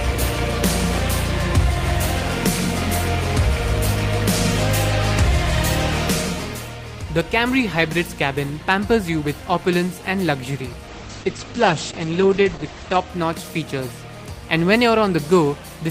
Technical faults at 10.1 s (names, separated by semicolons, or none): none